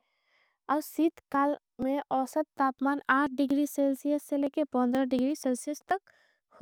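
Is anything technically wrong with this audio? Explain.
Yes. Periodic USB or driver dropouts, 0.14 to 6.39 s: a stalled bus skips about 10 ms every 0.24 s, ticking through the speech. They show as evenly spaced vertical lines on a spectrogram.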